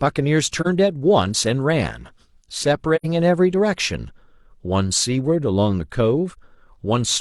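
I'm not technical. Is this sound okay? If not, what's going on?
No. The speech briefly goes silent three times: at about 0.61 s, at 2.95 s, and at 6.31 s. This is AAC frame loss with muting. Small pieces of the compressed audio went missing, and the player filled each gap with silence. The gaps at 0.61 s and 6.31 s last about 43 ms, and the one at 2.95 s lasts about 85 ms, which suggests two pieces were lost together. The sound fades out and back in smoothly, which sets this apart from a hard cut.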